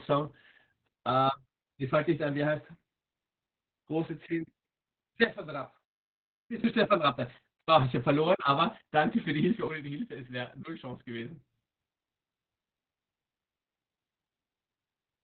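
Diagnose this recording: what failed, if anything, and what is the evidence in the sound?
Codec stage: heavy Opus voice compression runs through the whole clip. Nothing is present above 4.5 kHz, and the speech sounds muffled, hoarse and slightly robotic. That points to narrowband SILK at around 8 kbps, with the linear-prediction excitation coded coarsely.

Gain stage: a sudden gain jump drops the speech and the background noise together by about 13 dB at 5.24 s. Both jump back up at 6.64 s. The cause is likely a gain setting applied and then reverted without a ramp, somewhere in the processing chain.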